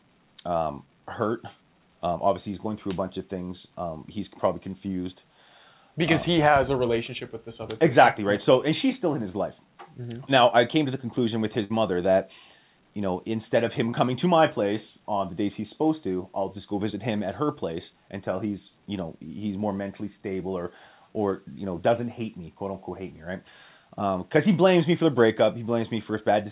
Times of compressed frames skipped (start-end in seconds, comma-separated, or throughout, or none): none